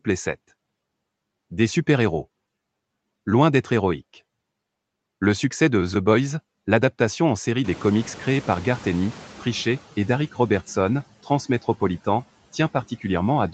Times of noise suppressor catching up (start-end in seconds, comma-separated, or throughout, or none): 7.64-9.81